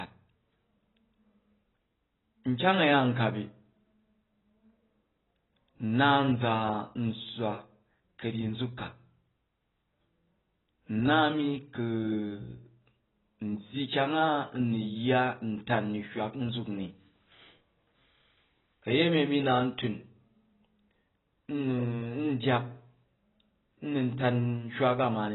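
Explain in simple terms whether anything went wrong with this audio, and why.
The speech sounds dull and muffled from start to finish. Nothing is heard above 3.9 kHz. S sounds come out fizzy and smeared. The likely cause is heavy AAC compression, which throws away high sounds and fine detail to make the file smaller.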